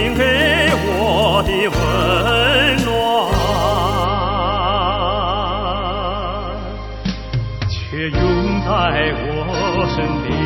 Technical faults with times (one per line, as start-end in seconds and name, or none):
0.00-10.45 low bit depth with dither
4.04-10.45 adaptive stream at a lower bitrate